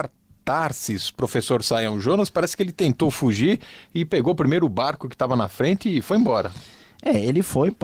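There are no technical faults to describe in time order in this speech clip, which has been through Opus voice compression working as intended.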